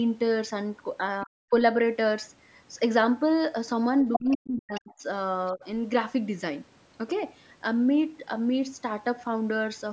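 At 1.21 to 1.26 s, the echo canceller likely failed to remove the loudspeaker signal from the microphone, so a brief scrap of the other side's voice leaks through, about 20 dB below the talker. From 1.25 to 1.53 s, both sides overlap. The canceller likely can't separate the talker from the echo, and the result is speech suppressed in double talk: the talker's voice is pushed down by up to roughly 40 dB, in pieces.

The pattern returns more heavily at 4.13 to 4.37 s, where the leaking voice comes through about as loud as the talker. From 4.15 to 5.05 s, the talker is again chopped and ducked by up to around 40 dB for most of that stretch. A further faint fragment of leakage sits at 4.75 to 4.81 s.

At 5.47 to 5.51 s, a very faint trace of the other side leaks through. From 5.53 to 5.64 s, a shallower double-talk dip of about 15 dB briefly lowers the talker.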